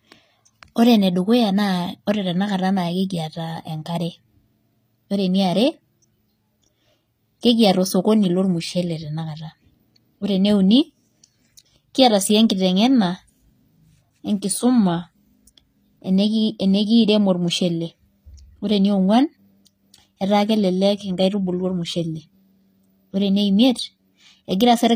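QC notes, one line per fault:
Throughout, HE-AAC compression: s sounds are gritty and lispy, likely from treble copied up by band replication; the spectrogram shows repeated, smeared upper bands stopping at 15.5 kHz.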